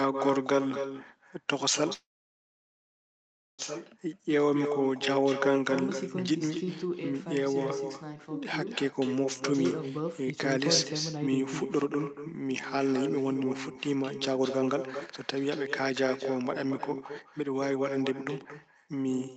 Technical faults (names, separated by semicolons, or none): echo with no canceller; call audio freeze; jitter buffer slow-down; jitter buffer speed-up